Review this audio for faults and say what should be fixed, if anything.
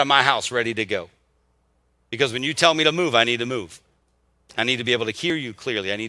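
Nothing to fix: no faults heard anywhere in the speech.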